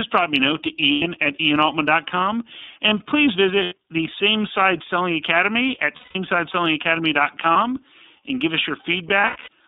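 The whole recording passes through the iLBC codec, band-limited to roughly 200 Hz to 3.7 kHz. Its 30 ms frames, each coded independently, leave the speech intelligible but plainly rough and synthetic. The coarseness fits iLBC's 13.33 kbps mode.

Lost iLBC frames occur at 0.93–1.02 s and 3.63–3.73 s (90 ms each), 5.96–6.16 s (180 ms), 7.52–7.57 s, and scattered across 9.21–9.48 s, with the longest run about a tenth of a second. The decoder repeats the last pitch cycle with added noise, producing held, buzzy vowels that recover almost immediately.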